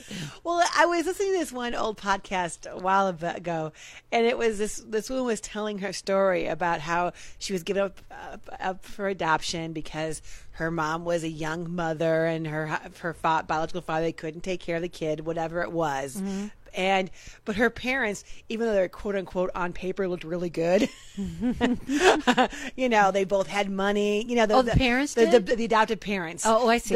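Nothing in the audio stood out as a technical problem on listening.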